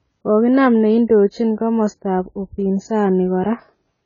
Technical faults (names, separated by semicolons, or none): AAC compression